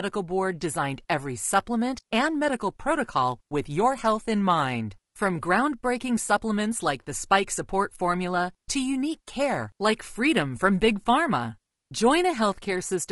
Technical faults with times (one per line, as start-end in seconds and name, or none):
0.00-13.12 low-delay AAC compression